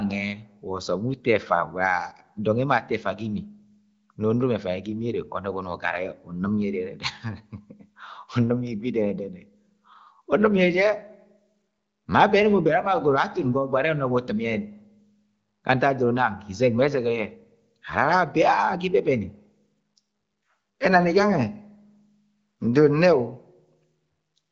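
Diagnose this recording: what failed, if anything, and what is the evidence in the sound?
Nothing failed: the speech comes through the AMR wideband (HD Voice) codec with no fault to diagnose anywhere in the sound.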